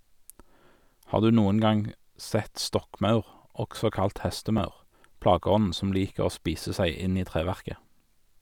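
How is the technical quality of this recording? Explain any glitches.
One glitch stands out, a repeated buffer at 4.58 s in the speech. The playback device ran short of fresh audio and played its last small block again, so one piece of roughly 5 ms sounds twice with a hard seam at each join. At that tiny size it comes across as a click or brief buzz rather than an audible stutter. Unlike a dropout, nothing goes silent and essentially no audio is missing. The sound simply doubles for an instant.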